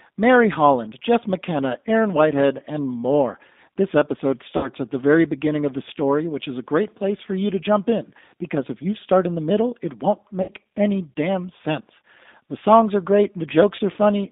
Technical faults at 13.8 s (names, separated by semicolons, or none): G.729 codec; VoIP packet loss concealed by the speech codec